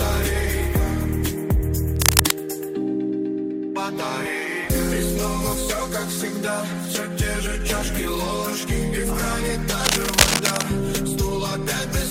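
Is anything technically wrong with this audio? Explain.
Yes. Two bursts of cable scratch noise interrupt the audio, from 1.96 to 2.33 s and from 9.80 to 10.63 s. The likely cause is a worn cable, connector or control being disturbed, so its contact resistance jumps about erratically and injects dense, irregular noise. The first burst is short and sits well above the sound. The longer second burst is at roughly the same level as the sound. Both are heard as a rough scratching rustle.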